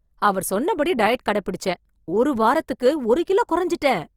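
A speech clip in which the whole recording sounds grainy and rough, with a noisy texture on the voice, even though the band still reaches to about 20.4 kHz. The likely cause is Opus compression in its CELT music mode at a low rate, which fits around 24 kbps. When bits run short, this mode keeps each band's energy but refills thin bands with noise or folded copies of lower bands. That leaves the spectrum full but turns tonal parts coarse, and here the damage is plainly audible. At 3.25 s a brief hiss of about 16 ms arrives just ahead of a sharp onset, blurring its attack. This is pre-echo. The transform spreads its quantisation error across the whole block, so noise sized for the loud attack also spills into the quiet moment before it.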